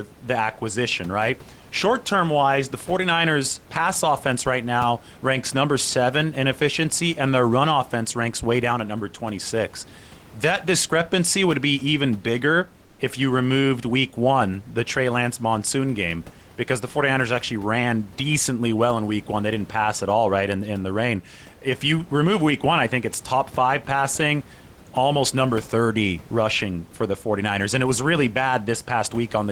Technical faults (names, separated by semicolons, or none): comfort noise in place of the background